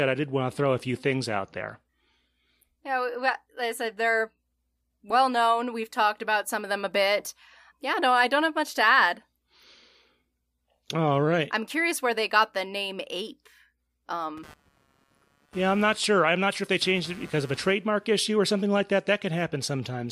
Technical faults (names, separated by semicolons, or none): computer activity noise